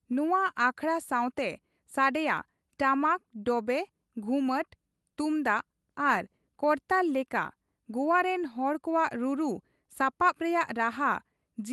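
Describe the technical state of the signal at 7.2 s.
At 7.2 s the speech is intact, with no fault at that moment, the sound having simply passed through the WebRTC call path.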